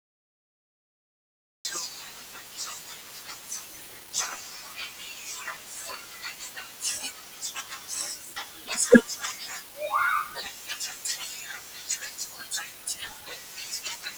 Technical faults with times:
0.00-1.65 cut-off start

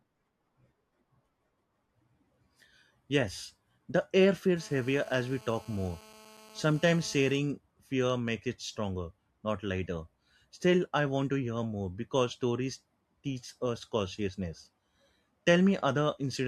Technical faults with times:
4.57-7.38 GSM phone buzz

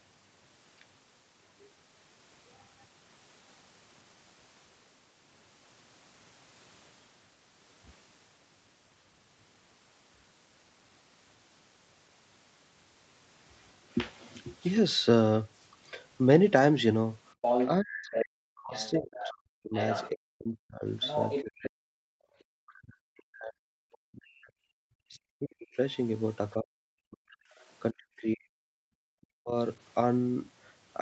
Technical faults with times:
17.41-20.10 other side's voice leaking through
17.81-29.55 speech suppressed in double talk
21.01-21.42 other side's voice leaking through
22.29-22.35 background gated by the echo canceller
22.39-22.44 other side's voice leaking through
23.92-23.97 other side's voice leaking through

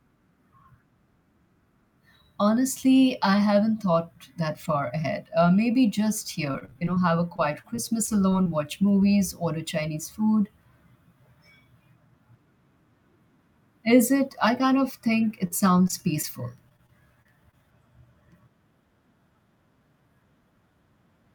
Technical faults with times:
6.51-6.98 repeated packet loss (robotic sound)
7.36-8.47 repeated packet loss (robotic sound)
15.47-15.52 short stall from a late packet
15.88-15.91 short concealed packet loss
16.22-16.25 short concealed packet loss
16.69-17.55 repeated packet loss (robotic sound)

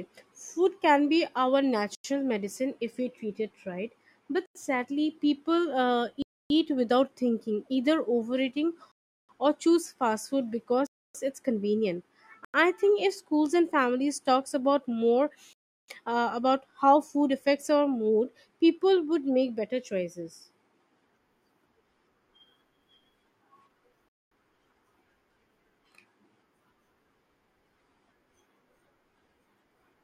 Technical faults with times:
1.95-2.04 block of digital silence
4.46-4.55 block of digital silence
6.22-6.50 block of digital silence
8.92-9.29 block of digital silence
10.87-11.15 block of digital silence
12.45-12.54 block of digital silence
15.53-15.88 block of digital silence
24.09-24.31 block of digital silence

